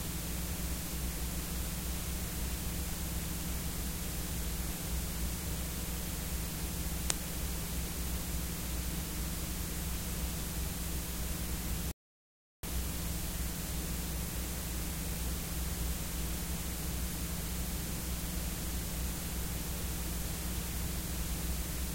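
At 11.91 s the sound drops abruptly to silence, then picks up again at 12.63 s exactly where it broke off, with nothing missing. This is a rebuffering stall. The player used up its downloaded audio and waited for more to arrive, adding about 0.72 s of dead air.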